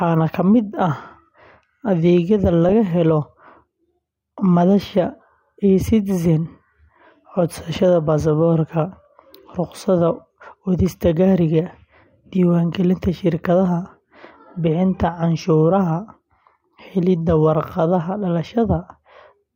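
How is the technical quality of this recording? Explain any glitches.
There is one glitch: a brief burst of DAB burbling from 2.69 to 2.72 s. Weak reception let bit errors slip past error correction into the MP2 data. Wrong samples put short blips of noise into single sub-bands. The speech briefly burbles, which fits a few damaged frames.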